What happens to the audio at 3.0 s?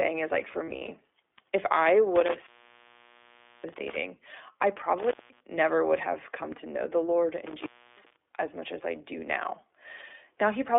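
Right after "if I", an intermittent contact kicks in, running from about 2.16 to 3.96 s. A loose plug or cable breaks the connection, so the sound drops out for roughly 1.16 s in total, with crackle at the edges and faint hiss while the line is open.

Underneath that, the whole clip is squeezed through the iLBC codec at 15.2 kbps, which fits a narrowband phone line of about 300 Hz to 3.5 kHz. Each 20 ms frame is coded on its own, so what's left sounds thin, a bit rough and synthetic, and the damage is plainly audible.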